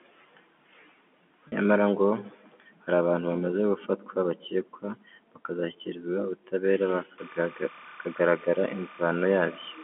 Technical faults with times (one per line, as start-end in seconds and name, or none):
1.48-1.52 packet loss with pitch repetition
7.18-9.83 timecode bleed